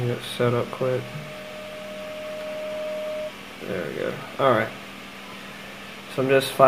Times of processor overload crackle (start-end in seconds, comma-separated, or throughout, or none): none